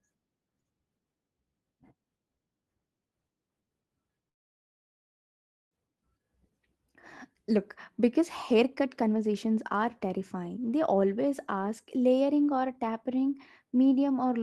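From 4.29 s to 5.75 s the speech cuts out: the last sound trails off in a brief fading buzz, then nearly a second and a half of silence follows before the talker returns mid-flow, with about a second of speech simply gone. This is likely a long network dropout. Packets stopped arriving, the receiver stretched the final fragment briefly and then fell silent, and when audio resumed the lost stretch was skipped, shifting the delay by roughly 400 ms.

Shortly after, the speech sounds rushed while the pitch stays the same. From 7.50 to 7.59 s it lurches forward at 151% speed, shedding about 50 ms. Then from 7.99 to 10.59 s it runs at 112% speed, losing about 300 ms over the span. This is a jitter buffer speed-up. The buffer held more audio than its target, so the receiver repeatedly cut out tiny pitch-period-sized slices to pull the delay back down.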